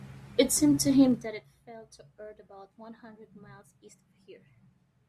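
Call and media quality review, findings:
Zipper noise, 1.05 to 1.49 s: fast ticking riding on the speech while the level drops by around 20 dB. Probably the gain stage or volume control stepping unsmoothed in 1 dB jumps, roughly 40 a second, each jump clicking. Worth adding per-sample gain interpolation there.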